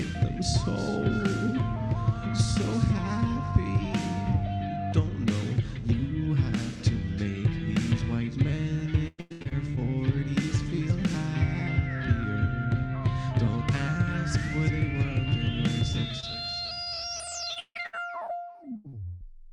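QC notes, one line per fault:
9.07–9.77 s, repeated packet loss (robotic sound): choppy stutter as six dropouts, the longest 108 ms, are patched by stretching the preceding sound, covering about half this span.
15.93–19.23 s, repeated packet loss (robotic sound): intermittent robotic chopping with fragments missing, from fourteen dropouts up to 153 ms, each filled by continuing the last sound before the next arrives.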